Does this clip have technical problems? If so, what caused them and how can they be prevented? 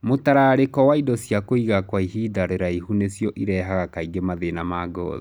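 No, this clip has no technical problems, so there is nothing to trace to a cause or to prevent.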